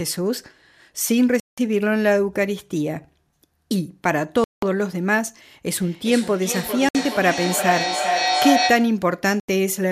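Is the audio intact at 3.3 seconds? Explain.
Yes, at 3.3 seconds the speech plays through intact, with no fault at that moment.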